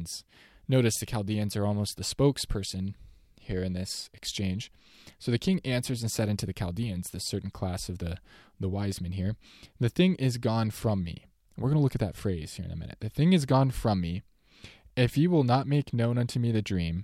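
Nothing stood out as a technical fault on listening to this speech recording.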